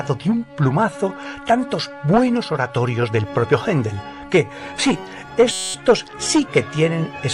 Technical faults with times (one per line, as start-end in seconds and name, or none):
5.51-5.74 system hang loop